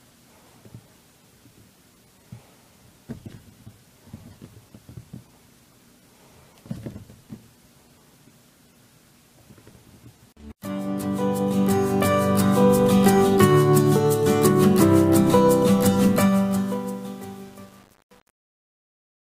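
An undithered fade stage, which fits 8-bit resolution, causes truncation distortion from 16.04 s to the end; from 16.4 s the fading sound turns gritty.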